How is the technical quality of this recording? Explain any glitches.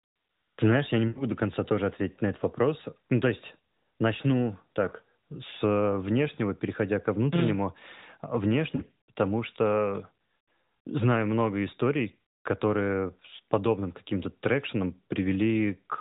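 The recording has two kinds of glitch: dropouts from lost AMR speech frames and a DC step. All of it passes through the narrowband AMR mobile codec. Its light coding damage and the missing content above 4 kHz fit the 12.2 kbps mode.

Lost AMR speech frames occur at 1.08 to 1.23 s, at 8.76 to 8.82 s, and at 10.44 s. The first falls between "знаешь я не" and "до конца тоже ответить". Radio errors corrupted the frames, so the decoder repeated the last good pitch and vocal tract settings at falling gain. The first gap spans about 80 ms, which fits four 20 ms frames. The voice is smeared and then fades. The second is a shorter 40 ms gap. The third conceals about 100 ms, and the voice returns rough.

A DC step begins at 6.11 s, just after "есть начну так с". It ends at 13.67 s. The zero line of the waveform jumps to an offset, about seven and a half seconds before the step ends. A shift like this fits an input with an offset being switched in. 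Each step is heard as a low thump or click, while the speech continues unchanged.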